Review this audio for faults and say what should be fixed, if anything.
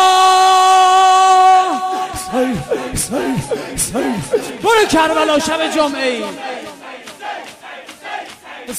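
Nothing needs fixing; no faults can be heard here.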